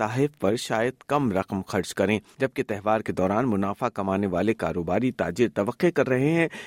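No audible technical faults occur anywhere in this speech.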